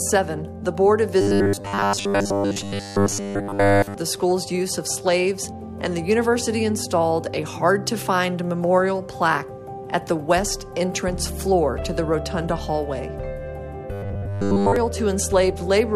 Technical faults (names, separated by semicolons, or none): robotic sound from repeated short buffers